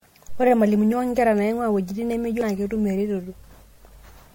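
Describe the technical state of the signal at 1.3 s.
At 1.3 s the speech carries generation loss that runs through the whole clip, likely from repeated lossy MP3 passes, around seven, at what sounds like 64 kbit/s, each requantising on a shifted frame grid. Noise and spectral holes accumulate, leaving swirly, hollow, smeared speech with blurred attacks and nothing above 16.5 kHz.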